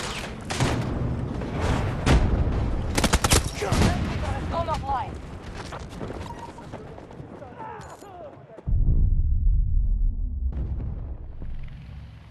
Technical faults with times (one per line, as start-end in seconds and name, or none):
none